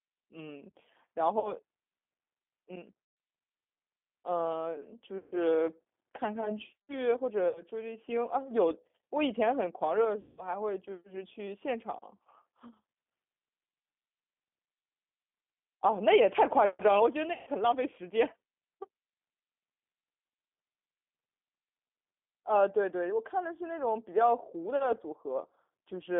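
Throughout, the G.729 codec confines the speech to roughly 250 Hz–3.5 kHz and rebuilds it from a few pulses per frame, leaving a rough, synthetic texture. VoIP packet loss concealed by the speech codec occurs at 1.40–1.53, 3.05–3.17, 5.18–5.41, 7.49–7.63, 10.21–10.48 and 17.33–17.50 s. The decoder extrapolates the previous sound into a fading buzzy tone or coloured noise, with weakened speech lingering afterward.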